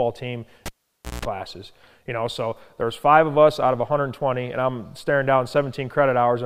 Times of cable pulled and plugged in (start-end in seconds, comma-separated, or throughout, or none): 0.66-1.25